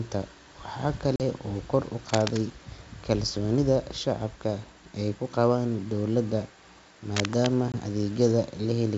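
A speech recording over a wideband call has two abrupt dropouts and two bursts of scratching. At 1.16 to 1.22 s the sound cuts to a hard-edged silence of about 40 ms, roughly two packets' worth, and at 7.72 to 7.78 s a shorter 20 ms gap, about one packet. Each time the speech comes back slightly distorted before settling. This is packet loss on an ADPCM call: the missing audio is filled with silence, and the decoder's adaptive predictor and step size drift away from the sender's, taking some tens of milliseconds to re-converge. From 2.08 to 2.37 s and again from 7.16 to 7.47 s, a dense, uneven rustling rides over the speech at about 5 dB below it. This is cable scratch noise, most likely from a worn cable, connector or control being moved so that its contact resistance jumps rapidly and injects bursts of noise. The G.722 wideband coding carrying the call still reaches up to 7 kHz.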